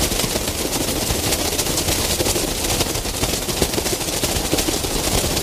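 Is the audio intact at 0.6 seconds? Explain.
Yes, the audio is intact at 0.6 seconds, with no fault present at that moment.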